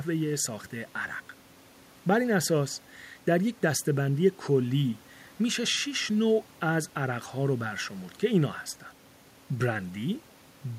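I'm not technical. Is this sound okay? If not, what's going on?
Yes, this sound is okay, and nothing is going wrong in it.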